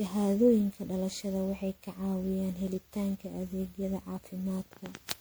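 Speech with generation loss throughout. It sounds swirly, hollow and smeared, with blurred attacks. That points to MP3 at about 128 kbit/s, likely re-encoded around ten times.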